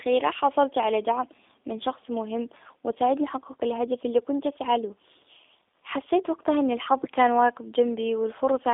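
Speech runs through a G.729 codec for its whole length, narrowed to a telephone band of roughly 300 Hz to 3.6 kHz, which points to an 8 kbit/s VoIP link. Each 10 ms frame is rebuilt from a vocal tract filter, a pitch predictor and a few pulses, so the voice sounds plainly rough and synthetic. That buzzy texture separates it from a simple band-limited phone line, which would be muffled but smooth.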